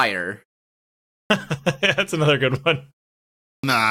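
A short speech clip with a clipped start after a pause, twice: the first 0.39 s of sound is swallowed from 0.91 to 1.30 s after a 0.55 s gap, and the first 0.38 s from 3.26 to 3.64 s after a 0.42 s gap. The output device sleeps during silence and needs time to wake, so the speech resumes abruptly. On a waveform, each onset jumps from flat to full amplitude. A spectrogram shows energy starting as a hard vertical edge with no gradual build-up, while the muted pauses themselves look cleanly empty.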